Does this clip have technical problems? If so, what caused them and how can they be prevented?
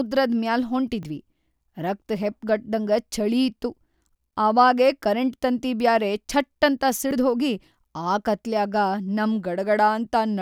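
Yes. A dropped buffer (overrun) likely occurred twice. Samples weren't collected before the hardware overwrote them, so the speech skips ahead: at 1.03 s (about 10 ms lost) and at 7.11 s, after "ತಂತಿ ಬ್ಯಾರೆ ಛಟ್ಟಂತ" (around 30 ms). Larger buffers or a higher-priority capture thread prevent this.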